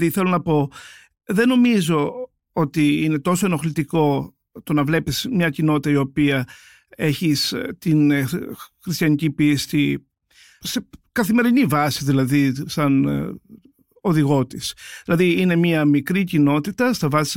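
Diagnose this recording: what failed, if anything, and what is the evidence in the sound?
Nothing failed; no fault is audible anywhere here.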